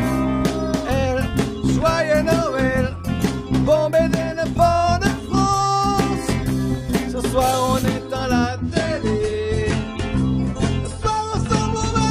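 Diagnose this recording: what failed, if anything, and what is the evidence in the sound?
An adaptive stream at a lower bitrate fails at the network stage. At 8.48 s the quality drops suddenly, with no gap, and stays low to the end. Nothing remains above 11.2 kHz and codec artefacts rise. This fits a switch from 96 to 32 kbit/s AAC.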